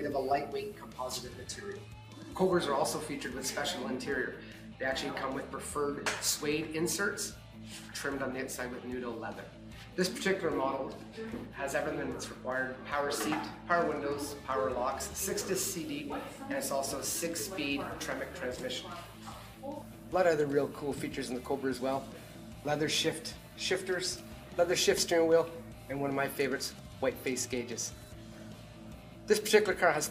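No technical faults can be heard anywhere in the audio, and the signal stays steady and intact throughout.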